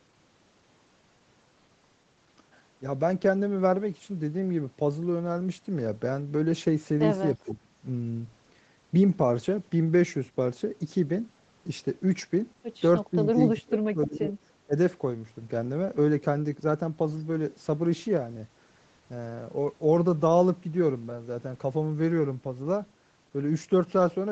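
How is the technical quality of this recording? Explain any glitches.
The speech has several short dropouts, most likely from speech suppressed in double talk. An echo canceller mistook the talker for returning echo and turned them down. The dips fall at 7.36–7.74 s (roughly 25 dB) and 13.1–13.17 s (a slight dip, around 5 dB). The deepest is at 13.33–14.34 s (about 30 dB), followed by 14.66–14.74 s (about 20 dB). On a waveform they show as sudden notches in the envelope mid-phrase. A spectrogram shows the harmonics fading or breaking into fragments. Throughout the clip, the spectrum stops at 8 kHz, which fits a wideband Opus call path at around 20 kbps.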